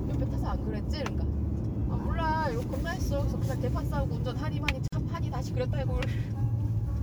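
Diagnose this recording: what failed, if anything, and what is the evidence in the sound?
Codec: a gap at a join of encoded pieces, a 47 ms gap at 4.88 s, with sound resuming where it stopped rather than skipping ahead like a dropout.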